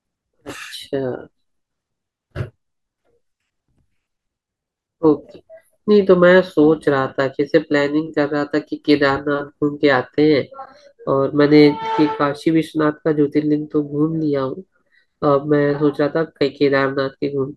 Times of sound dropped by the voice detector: none

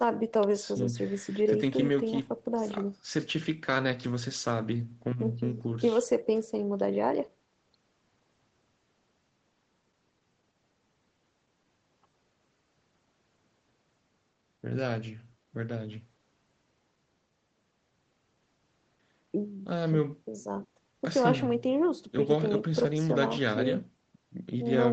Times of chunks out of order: none

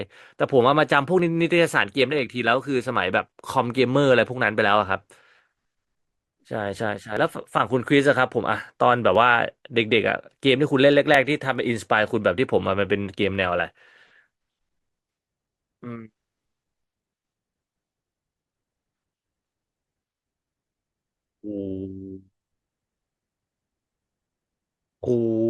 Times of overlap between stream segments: 1.19, 3.19, 5.18, 7.17, 9.15, 11.14, 13.13

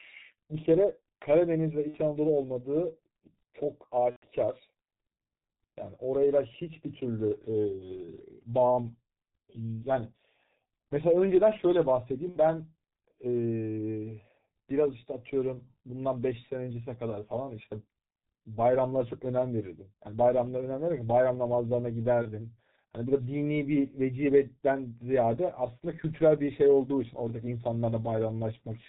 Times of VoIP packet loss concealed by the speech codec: 1.88-1.97, 4.10-4.25, 12.29-12.38, 22.22-22.30

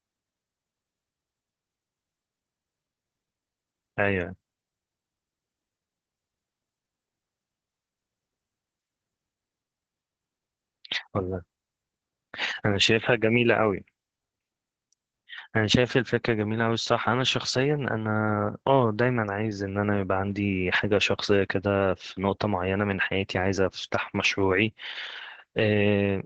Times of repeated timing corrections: none

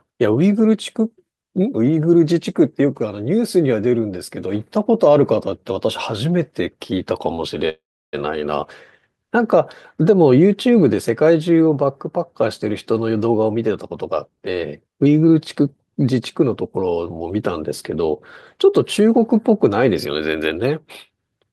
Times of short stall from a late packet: 7.35-7.40

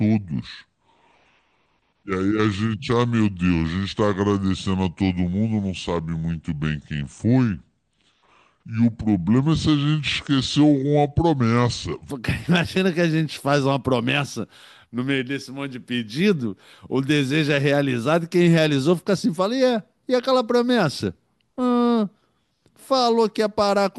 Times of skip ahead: none

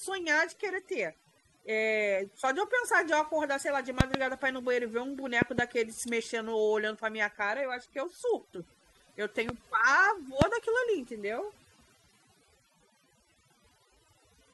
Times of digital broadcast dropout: none

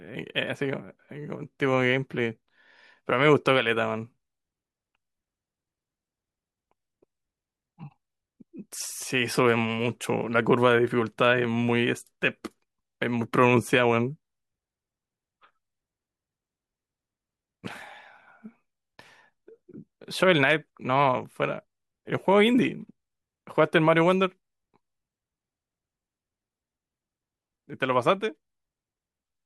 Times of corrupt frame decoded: none

